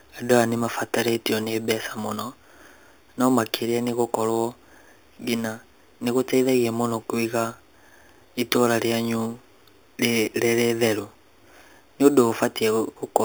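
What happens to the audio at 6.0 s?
At 6.0 s you're hearing imaging from sample-and-hold upsampling, and it runs through the whole clip. The speech was taken from 8 kHz up to 44.1 kHz by just repeating samples, so mirrored copies sit from 4 to 8 kHz, about 15 dB down, giving a metallic fizz that rises and falls with the speech.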